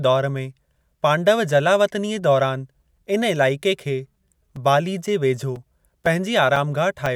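From 4.07 to 7.06 s the speech carries regular ticks every 0.5 s, periodic USB or driver dropouts blanking a few milliseconds of audio with silence each time.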